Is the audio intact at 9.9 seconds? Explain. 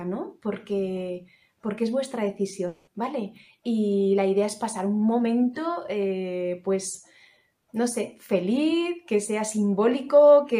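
Yes, at 9.9 seconds the audio plays through cleanly with no dropout, click, distortion or other fault to be heard.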